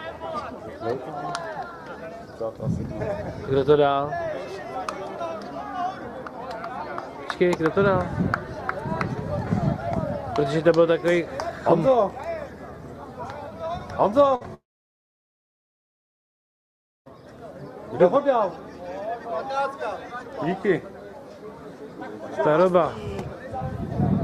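At 14.35 s a burst of packet loss cuts in and lasts until 14.43 s. About 60 ms of the original audio never arrives, and the receiver covers roughly 53 ms of that hole by carrying the last sound forward while turning it down. It comes across as a brief held buzz or hiss that sags away. On a spectrogram the frame before the gap is copied sideways as smooth, repeated bands that dim. In the waveform it appears as a short stretch that decays. The audio then resumes abruptly a little further on.

Right behind it, from 14.43 to 14.46 s, a short concealed packet loss removes about 20 ms more. Roughly 16 ms of that is filled with an extrapolation of the preceding sound, which then blends back into the real signal. It sounds like a brief smear or wobble. A spectrogram shows a thin, slightly blurred vertical strip with a soft join on its right edge.

At 14.54 s the sound stops for about 2.5 s, until 17.08 s, most likely because of a long network dropout. 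Concealment carries the last sound only briefly as a fading buzz or hiss. After that, about 2.45 s is silent. On the waveform this is a flat line after a short tapering tail, and on the spectrogram a dark, empty block. When the audio returns it picks up further on, so about 2.5 s of content is missing rather than delayed.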